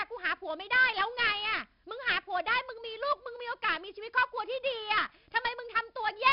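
Speech with a gritty hiss tracking every loud moment, roughened attacks and nothing above 5.3 kHz throughout: heavy 4-bit ADPCM compression, whose coarse prediction steps fit a rate near 44 kbps.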